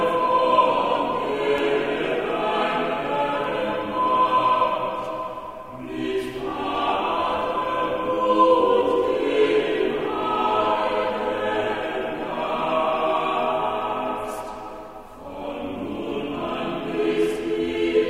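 A tiny tick at 1.58 s, barely more than a click, marks a block of digital silence about 0.67 ms long: the signal drops straight to silence and returns with no fade, which fits a 32-sample block left empty. At 3.44 s a slightly fuller tick comes from a second dropout of about 2.67 ms, consistent with a 128-sample buffer not filled in time.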